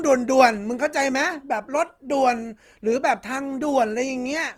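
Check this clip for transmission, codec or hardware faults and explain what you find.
One codec fault runs through the speech: Opus compression, likely at a low rate around 24 kbps in music mode, keeps band energies but fills starved bands with noise, leaving sound grainy and rough rather than swirly like MP3.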